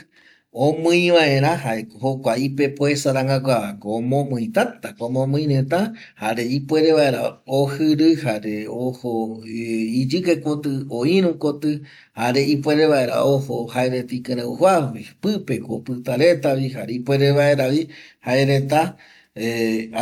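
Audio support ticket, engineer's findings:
Nothing stood out on listening to the speech; no symptom to log.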